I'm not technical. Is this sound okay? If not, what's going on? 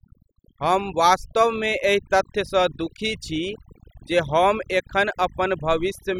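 No, it isn't quite right. The speech has overdone noise removal, and it lasts the whole clip, from start to finish. A cleanup tool meant to strip away background noise was pushed too hard. It shuts off parts of the sound it mistakes for noise, and soft parts of the voice get caught too. So the background between phrases drops and breaks up into twinkling, warbling specks.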